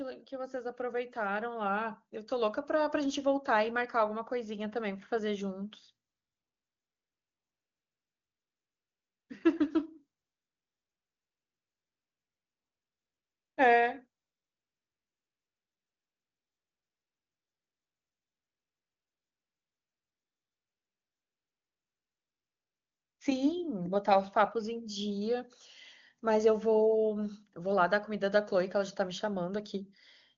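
From 0.29 s to 5.81 s, automatic gain rising lifts the whole signal by about 12 dB. The gain control judged the input too quiet and kept raising its amplification step by step, so the voice and the room noise swell together over several seconds rather than the voice alone growing louder. On a waveform the envelope widens steadily across this span, and on a spectrogram the background floor brightens alongside the speech energy.

AMR comfort noise then takes over three pauses, from 6.09 to 9.29 s, from 10.19 to 13.57 s, and from 14.21 to 23.19 s. In each, the phone decided no one was talking and stopped sending speech frames. The receiver filled the gap with synthetic noise built from a rough estimate of the background's level and spectrum. The real ambience drops out and an even, featureless hiss switches in at each boundary. On a spectrogram these spans look like flat, uniform texture with sharp vertical edges. 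The waveform shows a constant low band where the natural background would fluctuate. The codec's wideband sound is clean, which fits AMR-WB at its top rate of around 23.85 kbit/s.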